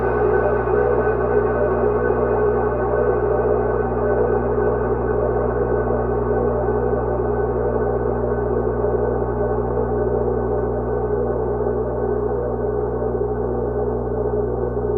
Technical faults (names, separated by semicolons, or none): mains hum; call bitrate drop